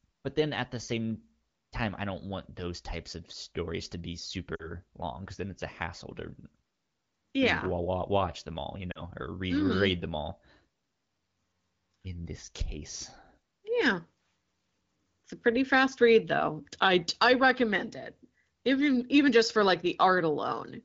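At 4.56 to 4.70 s and again at 8.91 to 9.01 s, the speech briefly smears and dips in level before it recovers, somewhat rough for an instant. These are lost AMR speech frames. About 40 ms of coded speech failed its checksum each time, which fits two 20 ms frames. The AMR wideband decoder filled the gap by reusing the last good pitch and vocal tract settings at falling gain.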